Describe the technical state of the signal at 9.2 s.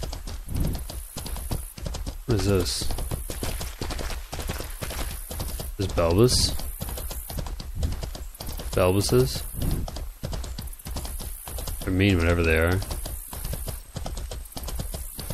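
At 9.2 s the signal is intact, with no audible fault at that moment.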